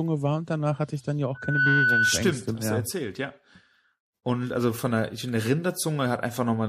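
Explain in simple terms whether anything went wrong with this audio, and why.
Three separate problems can be heard in this speech recording.

Throughout the clip there is a smeary, watery quality, most noticeable on hissing s sounds, with the top end sounding dull and a swirling underneath the speech. That is the signature of MP3 compression, most likely at a fairly low quality setting. To save data, the encoder drops the highest frequencies entirely and discards quieter details, which flicker in and out from moment to moment and leave those artefacts.

From 1.34 s to 2.30 s, just after "hatte ich dann ja", a loudspeaker feedback squeal appears. A steady tone at about 1.5 kHz rises over roughly a third of a second until it is louder than the speech, then holds until the words "mehr hast". It happens when a microphone picks up a loudspeaker that is playing that same microphone's signal. 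At one pitch the sound keeps feeding back on itself and growing, so it turns into a squeal.

At 3.54 s, right after "erzählt ja", compressed frames were skipped. Roughly a fifth of a second of audio is simply missing, and the speech jumps forward with a short smeared blip rather than a sharp click. The size of the gap points to several compressed frames of about 26 ms each that were either absent or rejected by the decoder as damaged. Neighbouring frames overlap, which blurs the join.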